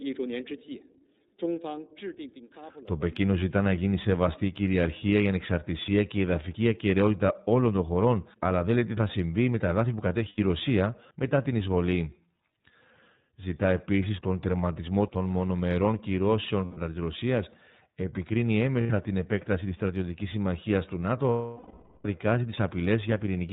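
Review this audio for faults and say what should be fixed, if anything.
The whole recording passes through the iLBC codec, and the damage is plainly audible. The band stops at 4 kHz, and the speech has a rough, slightly synthetic edge. Each frame's excitation is coded independently, and the frame rhythm suggests iLBC's 30 ms mode at about 13.33 kbps. To prevent it, send the speech over a wideband codec such as Opus, or raise the link quality so iLBC is not chosen.

Lost iLBC frames cause four gaps. The first runs from 10.29 to 10.39 s, right after "με τα εδάφη που". The second runs from 16.65 to 16.78 s, after "τερματισμό των μονομερών κυρώσεων". The third runs from 18.81 to 18.91 s. The fourth runs from 21.29 to 22.05 s, after "της στρατιωτικής συμμαχίας του". In each gap the decoder repeats the last pitch cycle mixed with noise, which sounds like a held, buzzy vowel. The 750 ms loss fades out before the speech recovers. 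To prevent it, reduce packet loss on the path and enable jitter buffering or forward error correction.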